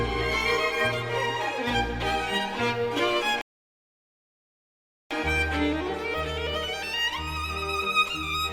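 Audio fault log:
3.41–5.11 s, rebuffering stall: the sound drops to silence for about 1.7 s and resumes exactly where it stopped, because playback ran dry until more downloaded audio arrived.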